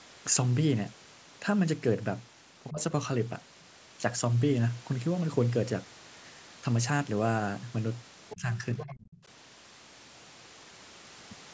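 At 2.7 to 2.79 s the talker's speech dips sharply, by roughly 15 dB at its deepest, for about a tenth of a second. This is speech suppressed in double talk. The likely cause is that the echo canceller could not tell the near talker from loudspeaker echo while both sides were active, so it pulled the microphone signal down. The result is a brief hole in the speech.

At 8.29 to 8.41 s the other side's voice leaks through, a faint second voice around 15 dB below the talker. The likely cause is loudspeaker echo that the canceller failed to remove from the microphone. Overlapping it, from 8.34 to 8.62 s, the talker's speech is again suppressed in double talk, dropping by about 10 dB for roughly a third of a second. The likely cause is the canceller ducking both voices as they collide. The suppression sounds like a softened patch. From 8.78 to 9.23 s the other side's voice leaks through again, at a similar low level, likely residual echo that escaped cancellation. 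Throughout, the call microphone processing leaves nothing above 8 kHz.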